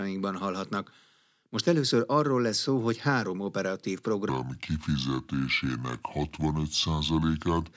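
From 4.29 s to 7.73 s the speech drops into a wrong sample rate fault. The samples are played back slower than they were captured, with no resampling in between. Speed falls to about two thirds, and pitch drops by about 7 semitones with it. The ratio fits 24 kHz material played at 16 kHz. The voice turns deep, heavy and dragging. Timing and pitch sag together for that whole stretch.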